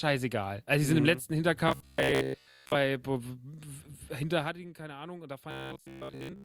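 From 1.68 to 2.76 s the speech turns into a rigid, metallic buzz. This is robotic sound from repeated short buffers. The buzz sits at 66.7 Hz, a 15 ms period. That points to fresh audio arriving too slowly, so the software likely loops the last 15 ms or so to fill the gap. Most of the real signal is skipped. The speech rhythm still roughly shows through.

From 4.30 to 4.69 s there is zipper noise. The level drops by roughly 15 dB. It does so in coarse, unsmoothed steps, around a hundred per second. Each step leaves a tiny click. Together they make a fine ticking rasp that rides on the speech while the level falls.

From 5.51 to 6.44 s the same robotic buzz returns, again at 66.7 Hz. It runs right to the end of the clip.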